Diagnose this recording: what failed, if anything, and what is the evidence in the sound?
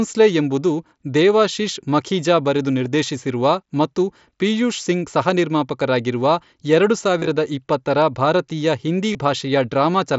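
Concealed Bluetooth headset packet loss on the radio link: a nearly hidden repeat at 2.85 s after "ಎಂಬುದು ದೇವಾಶೀಶ್ ಮಖೀಜಾ ಬರೆದು", and brief buzzy repeats at 7.19–7.30 s before "ಇಪ್ಪತ್ತರ ಭಾರತೀಯ ಹಿಂದಿ", and 9.13 s after it. The receiver looped recent waveform into the gaps, which shows as repeated periodic cycles on the waveform and flat, smeared harmonics on a spectrogram.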